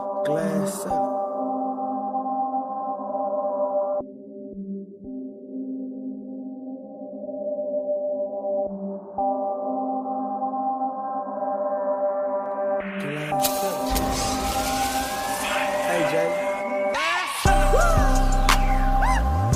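No technical faults can be heard anywhere in the audio.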